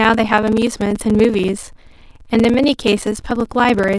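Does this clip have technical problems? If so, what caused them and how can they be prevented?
Yes. Throughout the speech there is a block size mismatch (padded): one stage delivers shorter blocks than the next stage consumes, so each block ends in a short stretch of silence. The repeated gaps produce a buzz at about 20.8 Hz, and the speech runs at 0.889 times normal speed with roughly normal pitch, which fits 1024-sample blocks being padded to a larger size. On the waveform, evenly spaced near-silent segments recur about every 48 ms. On the spectrogram, thin vertical gaps cut through every harmonic at that rate. To prevent it, make the writing and reading stages agree on block size, or buffer the audio in between so that partial blocks are joined rather than zero-filled.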